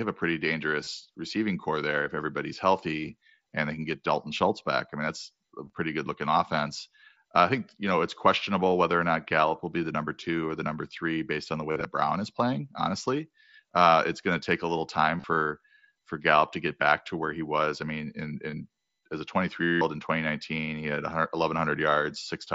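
Speech over a wideband Bluetooth headset link drops voice packets, and the receiver fills each gap by repeating recent waveform. This concealed Bluetooth headset packet loss is a brief buzzy hold at 0.84–0.87, 5.65–5.70, 11.71–11.85, 15.18–15.24 and 18.51–18.53 s, and a 180 ms held tone at 19.63–19.81 s.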